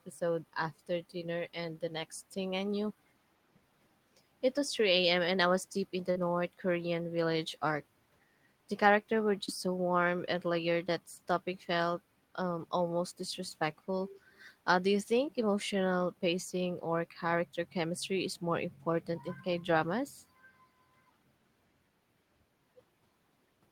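A DC offset runs through the whole speech clip: the waveform sits shifted off zero by a constant amount. It cannot be heard as a sound in its own right, which separates it from mains hum or rumble. Those carry a pitch at 50 or 60 Hz or low, moving energy. This appears only as fixed energy at 0 Hz, eating into headroom so the signal clips sooner on one side.

Short concealed packet loss occurs twice. From 6.11 to 6.17 s about 40 ms of audio failed to arrive in time, and from 9.45 to 9.49 s about 20 ms. In each gap the receiver extended the preceding sound, carrying its pitch forward or filling with shaped noise, before blending back into the real signal. The result is a brief smear or wobble rather than the hard silence of a dropout or the sharp spike of a click.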